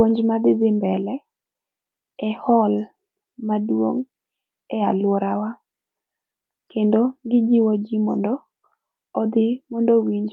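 No technical fault can be heard anywhere in this speech recording. At no point does the sound break, jump or change in a way that would mark a problem in the chain.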